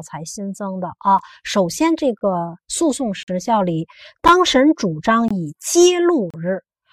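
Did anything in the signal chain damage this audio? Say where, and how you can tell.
Yes: gaps between stream segments at playback. Mismatched segment time stamps leave hard-edged silent holes of 6 to 48 ms at 1.19, 2.19, 3.23, 4.28, 5.28 and 6.30 s. These appear as blank vertical stripes on a spectrogram and flat stretches in the waveform.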